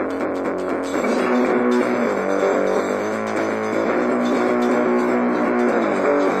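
No technical faults can be heard anywhere in this recording.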